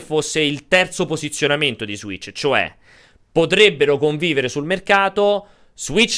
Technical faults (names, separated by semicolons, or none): none